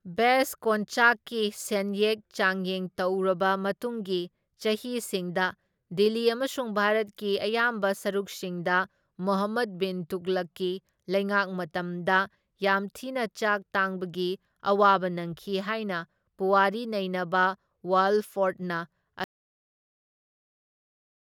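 At 19.24 s the speech cuts off abruptly and never returns: the last 2.1 s or so, right to the end, are silent, with no room tone or background hiss underneath. This is an audio dropout to silence. The likely cause is that the input signal was lost, through a disconnected device, a failed link or an accidental mute, while the recorder kept writing silence, so whatever followed is simply missing.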